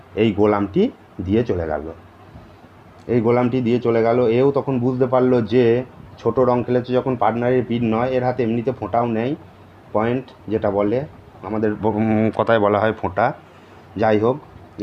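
No technical faults can be heard anywhere in this audio.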